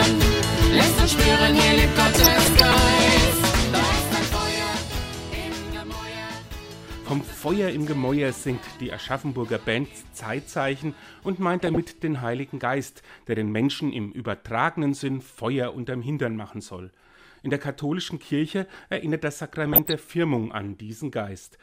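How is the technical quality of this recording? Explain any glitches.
DAB burbling mars the recording in three short bursts: 2.04 to 2.74 s, 11.50 to 11.77 s and 19.67 to 19.93 s. Weak reception let bit errors, a fraction of a percent, slip past error correction into the MP2 data, so corrupted samples put short blips of noise into single sub-bands and corrupted scale factors, where they got through, made sub-bands leap in level for up to a frame. Each burst adds burbling over the programme, the first lasting longest.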